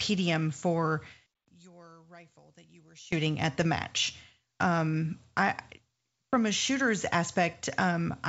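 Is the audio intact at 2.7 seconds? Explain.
No. From 1.26 to 3.12 s, which includes 2.7 s, the speech drops by about 25 dB and shrinks to a faint remnant of itself. The likely cause is one channel inverted: one side of the stereo pair has its polarity flipped, so when the two channels are summed to mono, the material they share cancels almost completely. All that survives is the small difference between the channels.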